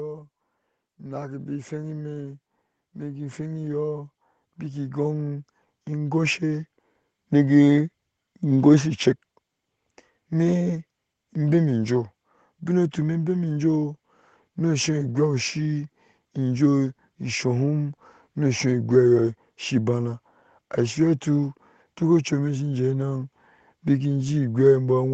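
From 0.96 s to 7.6 s, automatic gain rising: the gain control judged the input too quiet and kept turning it up, by about 12 dB in all, so the speech and the background noise swell together steadily, while the call path's top cuts off near 8 kHz.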